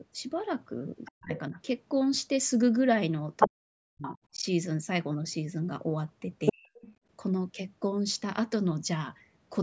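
At 1.05 to 1.39 s, a second voice sits about 15 dB under the speech: the other side's voice leaking through, likely loudspeaker echo the canceller failed to remove. Overlapping it, from 1.09 to 1.57 s, the talker's own speech is suppressed in double talk, likely because the canceller ducked everything while both sides spoke. The voice dips, as deep as roughly 40 dB.

The pattern repeats. Echo leaks at 3.4 to 3.5 s, now about 5 dB louder than the speech, and the talker then dips from 3.48 to 4.39 s. At 6.46 to 6.92 s the leak returns at a similar level, with a brief suppression from 6.52 to 6.69 s. Leakage adds an unwanted voice, while suppression removes the wanted one.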